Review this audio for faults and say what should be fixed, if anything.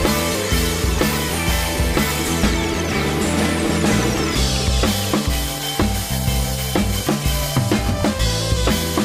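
No technical faults can be heard in this recording, so nothing needs fixing.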